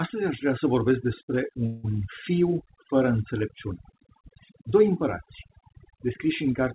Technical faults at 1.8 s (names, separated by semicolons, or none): overdone noise removal; call audio freeze